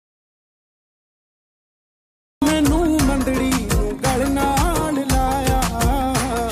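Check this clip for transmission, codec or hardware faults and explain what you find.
One fault is present. An audio dropout to silence runs from the start to 2.42 s. The input was likely lost through a disconnected device, failed link or mute, while silence kept being written. The gap is dead silence with no room tone. Sound then starts abruptly.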